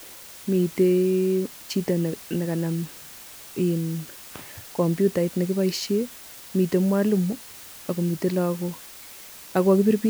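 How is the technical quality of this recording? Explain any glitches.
The recording has one persistent fault. Throughout the speech, low bit depth with dither: only 6 bits with dither added, so rounding error becomes a steady, even hiss about 20 dB below the speech, without distortion.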